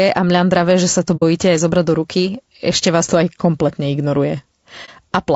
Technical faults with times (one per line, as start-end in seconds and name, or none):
0.00-5.36 low-delay AAC compression
1.16-1.23 AAC frame loss with muting
4.85-4.90 AAC frame loss with muting